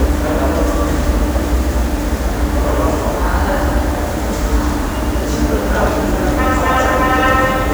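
Sounds run through the whole clip with a grainy, rough distortion that rises and falls with the sound itself, turning quiet passages gritty and letting the faintest moments sputter or drop to silence. That pattern points to low bit depth without dither, likely around 5 bits with plain rounding, leaving error about 20 dB below the signal. Unlike steady background hiss, this grit tracks the sound and vanishes when it stops.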